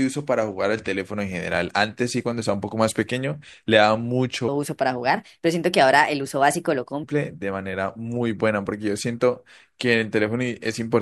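From 4.48 to 7.03 s, a section at the wrong speed appears. The speech runs 1.27 times too fast. Pitch rises about four semitones along with it, so the voice turns high and hurried. It likely came from playback on a mismatched clock.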